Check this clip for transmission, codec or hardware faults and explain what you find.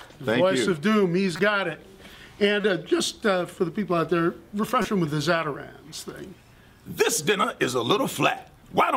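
There's one fault type here: corrupt frame decoded, showing up four times. Short blips land at 1.36–1.40 s, 2.61–2.64 s, 4.82–4.85 s and 5.85–5.95 s. Damaged compressed frames were decoded anyway, so misread gains and codes throw energy into the wrong frequencies for each hit. The first is about one frame, the middle two a couple, and the last several, so it runs longest. You get chirpy noise bursts peaking around −20 dBFS, the third a bit hotter and the last a bit quieter.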